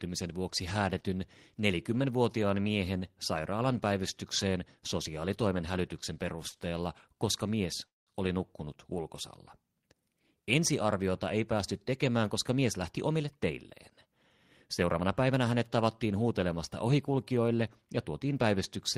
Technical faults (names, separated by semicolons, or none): short stall from a late packet; call audio freeze; jitter buffer speed-up